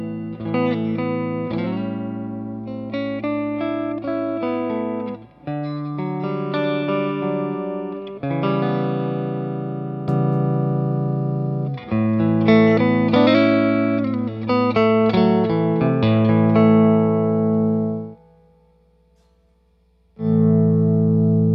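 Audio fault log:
No faults heard anywhere in the audio.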